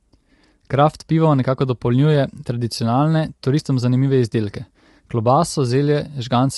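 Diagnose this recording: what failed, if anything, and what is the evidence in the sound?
Low-delay AAC compression, audible throughout the speech. The voice sounds rough and grainy, with noise filling the gaps between harmonics, and nothing is present above 11.7 kHz. This points to the codec stage, likely AAC-ELD at a modest rate, around 32 kbps. Its low-delay window leaks energy between neighbouring frequency lines. With few bits to spend, the encoder smears quantisation noise between the harmonics and discards the top band.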